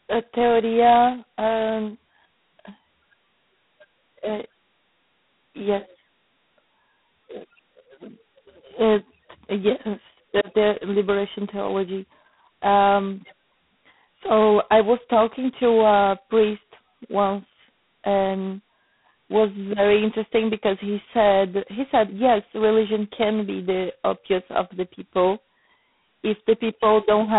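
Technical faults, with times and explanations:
Throughout, G.726 ADPCM coding. The speech carries a harsh, rasping hiss that rises and falls with its level. This codec sends only a few bits per sample, coding the difference from a running prediction. At so few bits, the prediction error becomes coarse noise riding on the speech. The heavy damage fits the 16 kbit/s rate, which is 2 bits a sample. The band runs from about 150 Hz to 3.6 kHz, and nothing passes above 3.9 kHz.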